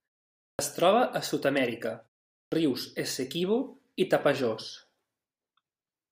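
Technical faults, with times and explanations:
0.52 to 0.59 s and 2.45 to 2.52 s, clipped start after a pause: each time speech resumes out of silence, roughly the first 70 ms (then about 69 ms) goes missing, so the onset lands abruptly with its leading sounds shaved off. The output path seems to drop into a sleep state during the gaps of 0.52 s and 0.45 s, and it needs a moment to wake and lock before audio gets through.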